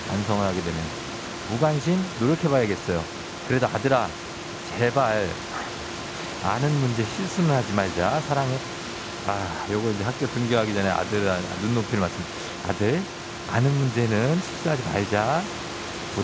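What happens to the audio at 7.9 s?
Nothing goes wrong at 7.9 s: the speech carries on intact, with the room's background noise sitting about 13 dB below it and the G.722 call path passing the sound through with nothing above 8 kHz.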